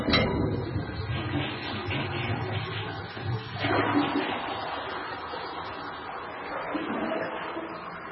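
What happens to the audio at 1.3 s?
At 1.3 s the sound is in the middle of damage that runs through the whole clip, and the likely cause is heavy MP3 compression at a starved bitrate, consistent with roughly 16 kbps. With so few bits, the encoder cuts everything above about 5.6 kHz and drops weaker frequency lines that flicker on and off between frames. The result is dull, band-limited audio with a watery, swirling texture, metallic chirps on bright content, and smeared attacks.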